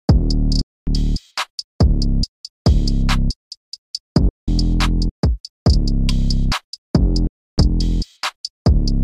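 The sound cuts to silence three times: from 0.61 to 0.87 s, from 4.29 to 4.48 s, and from 7.27 to 7.58 s, gaps of about a quarter, a fifth and a third of a second. Each time it comes back further along, as though it had kept playing through the hole. These are Bluetooth dropouts, likely from audio packets missing their delivery window to the headphones and being discarded, leaving the output silent until good packets arrived again.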